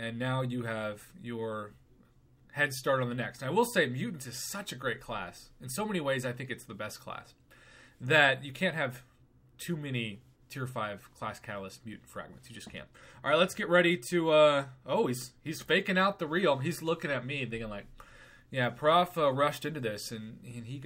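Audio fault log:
Nothing stood out on listening to this recording.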